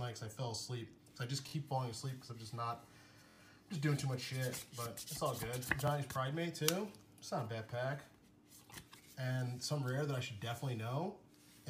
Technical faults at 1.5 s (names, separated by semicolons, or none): repeated buffer